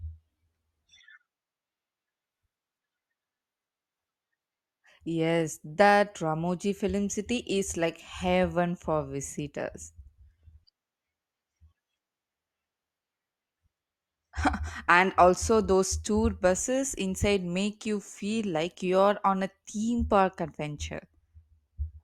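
No technical faults are audible.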